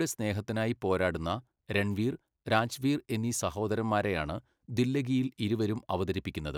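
No technical faults can be heard anywhere in the recording, and the speech signal stays intact throughout.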